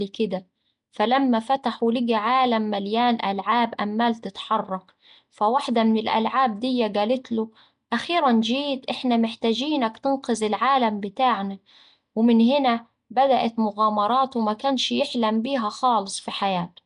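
From start to finish the speech carries a rough, hissy halo with a smeared, underwater feel, and nothing comes through above 10.7 kHz. That points to Nellymoser compression, likely from Flash's old Nellymoser Asao codec at something that fits about 44 kbps. It spends a fixed, small bit budget on short blocks, so quieter bands get no real data and are patched with noise, which is where that grainy fizz and blurring come from.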